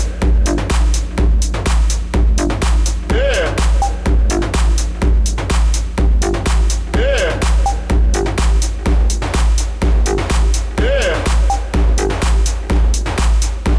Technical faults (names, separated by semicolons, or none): none